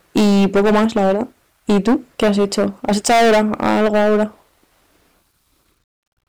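Harsh fuzz sits on every loud syllable from start to finish, the signature of hard clipping. The speech was driven about 18 dB past what the signal path could carry, so around a sixth of the samples have their peaks cut flat, spraying high harmonics.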